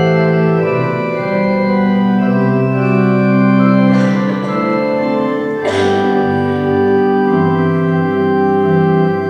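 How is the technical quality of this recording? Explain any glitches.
No glitches or technical faults can be heard here.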